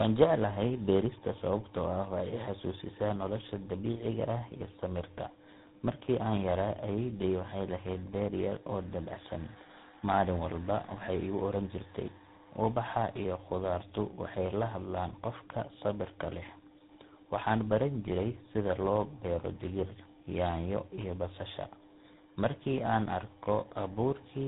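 Tandem speech coding runs throughout: the speech was decoded and re-encoded at several codec boundaries, with a final stage that fits GSM full rate, each coder degrading the last one's output. It sounds rough, warbly and muffled, with nothing above 3.8 kHz.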